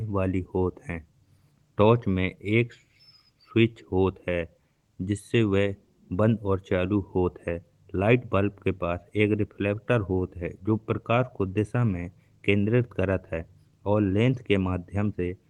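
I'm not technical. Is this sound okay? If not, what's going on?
Yes, the speech sounds fine; nothing is wrong.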